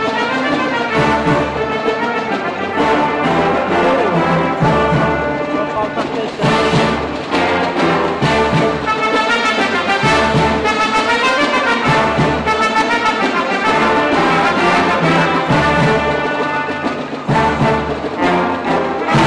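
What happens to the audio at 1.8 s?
Nothing goes wrong at 1.8 s; the audio plays through that moment intact, with no dropout, click or other fault to be heard.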